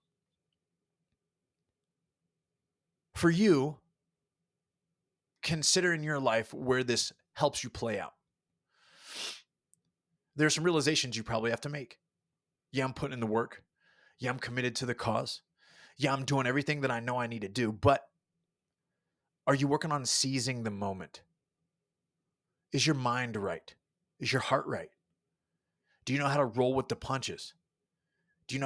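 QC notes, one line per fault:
Nothing stood out on listening to this speech clip.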